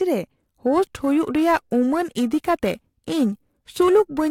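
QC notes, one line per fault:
0.66–4.31 s, periodic clock jitter: from 0.66 s to the end the speech takes on a rough, metallic edge that grows harsher on the brighter, higher-frequency parts of the sound and drops away in the pauses. Interference is wobbling the converter's sampling clock at a steady rate, around 1 kHz, so each component of the signal picks up sidebands that far above and below it. Higher frequencies are pushed harder by the timing error, which is why the sibilant, top-end detail suffers most.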